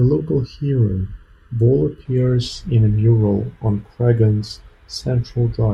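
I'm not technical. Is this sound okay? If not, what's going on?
No. For the first two seconds or so, up to about 2.05 s, the speech sounds hollow and phasey. That's channel delay (comb filtering): one side arrives a fraction of a millisecond late, and when the two combine, some tones cancel out, leaving it thin.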